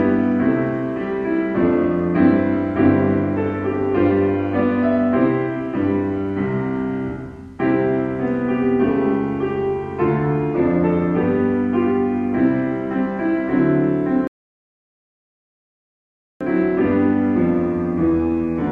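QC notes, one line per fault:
14.27–16.41 s, rebuffering stall: the sound just drops to dead silence for a little over 2.1 seconds, then picks up again exactly where it left off, with no skipped material and no repeat. That's the player running dry on downloaded audio and waiting for more data before carrying on. Nothing gets lost, but the pause adds about 2.13 s to the running time, so everything after it lands that much late.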